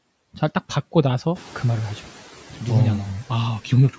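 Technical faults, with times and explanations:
1.35 to 2.03 s, noise suppressor catching up: the room noise jumps by about 11 dB at roughly 1.5 s, and the suppressor's estimate takes 680 ms to follow, so the noise pokes through underreduced at first, then settles down by about 5 dB once it adapts.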